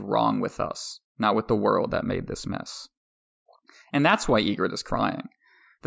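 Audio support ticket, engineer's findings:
Listened to the full speech recording with no audible issue found and nothing flagged for follow-up.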